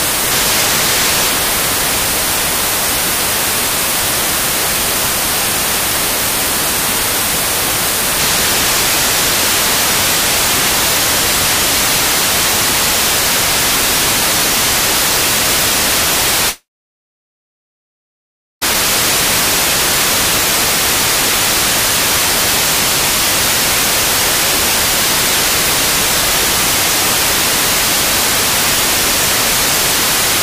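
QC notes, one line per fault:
16.49–18.63 s, long network dropout: the sound gives way to a brief fading buzz, then about 1.97 s of silence, and resumes with roughly 2.1 s lost, likely from a receiver concealing missing packets. The decaying tail and skipped material distinguish it from a plain mute.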